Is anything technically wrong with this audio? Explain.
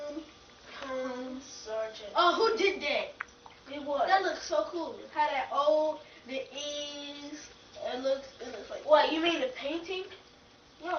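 No, nothing is technically wrong with this audio.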